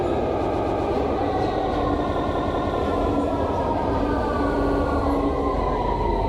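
A stuttering loop of the same short block, played three extra times, is heard from 0.46 to 0.85 s (a 128 ms block), 2.19 to 2.77 s (192 ms) and 4.62 to 4.82 s (64 ms). These are repeated frames: a run of compressed frames, probably four, six and two of them, was written again, lengthening the audio by 384, 576 and 192 ms.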